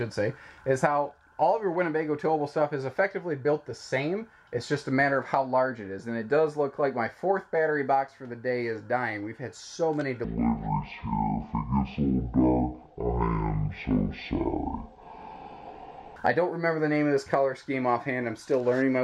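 From 10.25 s to 16.16 s the audio is stereo read as mono: left and right samples, stored interleaved, are taken in turn as one channel. Each stereo pair becomes two consecutive samples, so the passage plays at 0.5x speed and drops 12 semitones, a full octave. On a spectrogram the harmonics crowd into the lower half and a fainter mirrored copy fills the upper half. The waveform looks stretched to twice its width.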